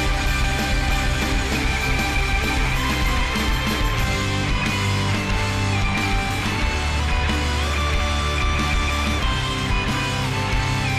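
No technical faults are audible anywhere in the recording.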